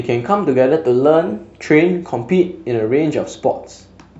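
From 0.73 s to 1.62 s the speech suddenly runs about 6.2% fast and rises by roughly a semitone (104 cents), then drops back to normal pitch and pace. This is a drift correction step, likely from clock-matching software changing its playback rate in one jump to rebalance its buffer. On a spectrogram the harmonic lines shift upward together and return abruptly at both edges, and the waveform's periods visibly shorten over that stretch.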